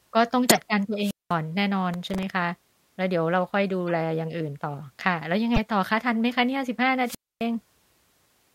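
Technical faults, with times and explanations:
0.48–0.59 s, 3.88 s and 5.54–5.59 s, corrupt frame decoded: damaged compressed frames were played anyway, so misread gains and codes throw energy to the wrong frequencies. The first burst is the strongest, the 3.88 s blip is faint at about −35 dBFS, and the 5.54 s one is loud at about −5 dBFS. On a spectrogram each appears as a short vertical smear unrelated to the speech harmonics, and on the waveform as a sudden spike.
1.00–1.34 s and 7.04–7.44 s, wireless microphone squelch dropout: the FM radio link faded, hiss rose, and the receiver's squelch muted the output for about 200 ms and then about 260 ms before the speech returned. The waveform shows a flat hole of near silence. The spectrogram shows a band of broadband static before a blank gap.
1.94–2.23 s, processor overload crackle: the processor repeatedly missed its deadlines, around ten times, with buffers of about 0.7 ms. 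Each miss replayed a sliver of old audio with hard edges, giving a gritty tearing over the speech. On the spectrogram this shows as a cluster of thin vertical clicks, and on the waveform as small discontinuities.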